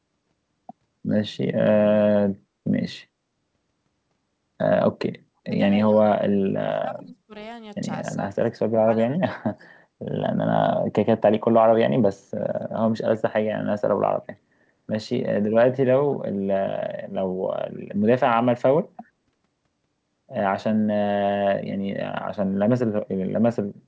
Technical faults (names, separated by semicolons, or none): speech suppressed in double talk; echo leak